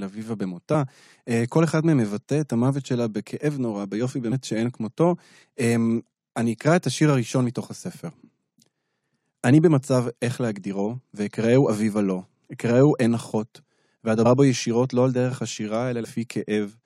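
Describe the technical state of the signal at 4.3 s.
Compressed frames skipped at 4.31 s: a short stretch of the encoded speech is never decoded, so playback jumps ahead by about 70 ms, which fits three frames of 23.2 ms each. At the join the speech jumps ahead abruptly.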